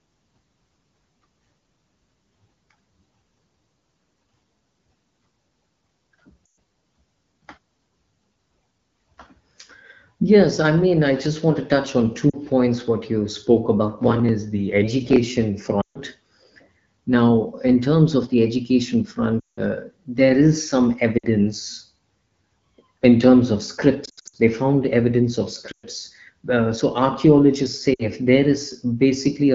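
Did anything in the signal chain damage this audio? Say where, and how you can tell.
Yes. Lost AMR speech frames on the radio link, at 6.46, 12.30, 15.81, 19.40, 21.17, 24.05, 25.72 and 27.93 s. The decoder repeats stale settings with fading gain, so the sound smears and dips.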